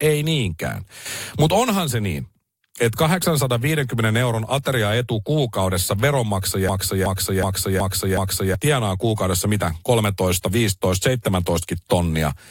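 A system hang loop from 6.69 to 8.55 s replays one 372 ms buffer five times, a 2.7 Hz stutter before "tienaa kuukaudessa mitä".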